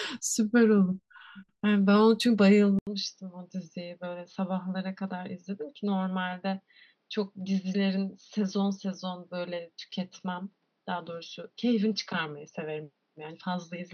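At 2.79 s the speech drops out for 80 ms, then returns about 5 dB quieter, duller and boxier, with nothing above 6.2 kHz and a faint new background hiss, and stays that way to the end. The likely cause is the input switched to a poorer device.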